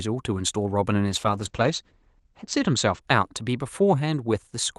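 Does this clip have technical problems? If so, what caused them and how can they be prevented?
Yes. A call bitrate drop runs from 1.1 s to 3.07 s. The call's bandwidth estimate fell, so the Opus encoder had to code the speech with far fewer bits. The sound turns coarse and rough, and its top end narrows from 12 kHz to 8 kHz. This fits a fall from about 64 kbps to about 11 kbps. The worst stretch lasts 1.36 s before the normal call sound returns. Keeping a steadier network link with more headroom, and setting a higher minimum bitrate for the encoder, would prevent it.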